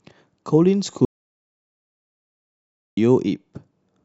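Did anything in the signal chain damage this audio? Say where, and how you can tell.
Yes. The input path likely lost its source, through a dropped device, a failed link or a mute, while recording carried on writing silence. From 1.05 to 2.97 s the speech cuts to silence with no room tone, and about 1.9 s of speech is gone.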